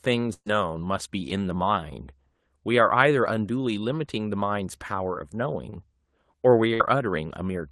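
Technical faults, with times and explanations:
0.33–0.48 s, burst of packet loss: About 120 ms of the stream failed to arrive, so the receiver stretched the last sound for about 125 ms and faded it out, with the final 50 ms silent. On a spectrogram, smeared, blurred harmonics narrow to a blank band, and the waveform envelope tapers to flat.
5.70–5.74 s, short concealed packet loss: Roughly 20 ms never reached the decoder in time and was filled by extrapolating the preceding sound before crossfading back. It is heard as a quick smear or wobble. A spectrogram shows a thin vertical seam with briefly repeated texture, and the waveform a slight splice in periodicity.
6.74–6.82 s, burst of packet loss: About 60 ms went missing, and concealment carried the last sound forward for about 60 ms, decaying as the gap went on, then jumped ahead to later audio. A spectrogram shows a short stretch of frozen, softened spectra, and the waveform a fading repeat before the resumption. 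All of this sits within the Opus band-limit, visible as an empty region above about 12 kHz.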